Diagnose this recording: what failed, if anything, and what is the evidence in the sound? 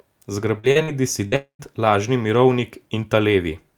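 The network stage shows short concealed packet loss. Brief smears or wobbles occur at 0.59–0.66 s, 0.71–0.78 s, 0.83–0.91 s and 1.28–1.35 s. Each covers 40 ms of speech that arrived too late. The receiver extended the last sound, then blended back into real audio.

From 1.36 to 1.62 s the last sound is continued and fades, then about 110 ms of silence. Speech resumes further on, with 240 ms missing. This is likely a long network dropout. Concealment ran out before packets returned.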